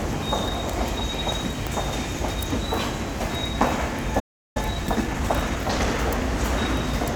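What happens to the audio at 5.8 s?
A time-compressed catch-up runs from 4.57 to 5.99 s: after a stall, the player trims and cross-fades small slices, playing the sound about 1.25 times faster at unchanged pitch.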